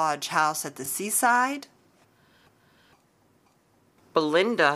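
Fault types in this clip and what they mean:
Overlapping chunks: the speech was handled in 2-second blocks, each starting 20 ms before the previous one ended. That 20 ms plays twice at every join, heard as a short click or stutter at 0.86–0.88 s and again at 2.88–2.90 s.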